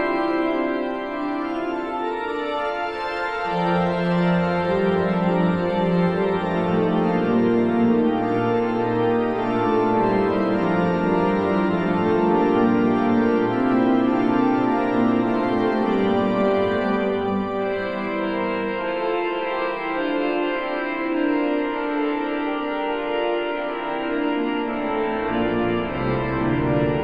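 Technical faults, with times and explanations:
Throughout, doubled audio track: a full-band copy trails about one second behind, roughly 5 dB quieter, with no decay or room colour, likely a second capture path.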